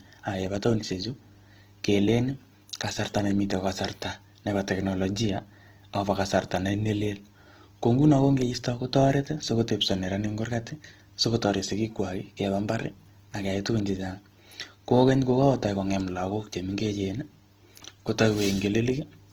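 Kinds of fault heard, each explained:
Opus compression: throughout, the speech sounds plainly grainy and rough; its band energies are kept, but fine detail is filled with folded or noise-like content. This is likely Opus in its music mode at a low rate fitting 16 kbps, and the audio still extends to about 20.2 kHz.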